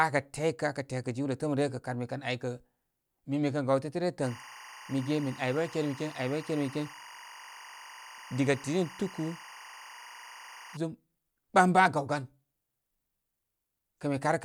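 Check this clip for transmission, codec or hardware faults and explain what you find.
One fault is audible in this speech clip. Timecode bleed runs from 4.23 to 10.77 s. Linear timecode from an adjacent track or cable is leaking into the audio path. Its square-wave code flips between tones near 1 kHz and 2 kHz, and the framing pattern fits 23.976 fps timecode. The result is a steady, chirping warble sitting roughly 20 dB below the speech.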